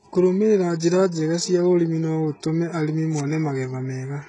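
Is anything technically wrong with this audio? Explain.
Yes. Throughout the speech, the s sounds come out gritty and metallic, the treble sounds bright but synthetic, and nothing is heard above 11.1 kHz. The likely cause is heavy HE-AAC compression, which fits a bitrate near 12 kbps: the upper band is copied up from lower frequencies, so its harmonics no longer line up.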